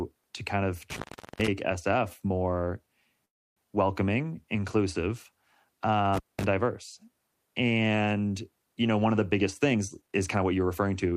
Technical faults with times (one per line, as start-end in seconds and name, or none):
0.90-1.48 intermittent contact
3.25-3.58 call audio freeze
6.14-6.44 intermittent contact
9.32-11.13 jitter buffer speed-up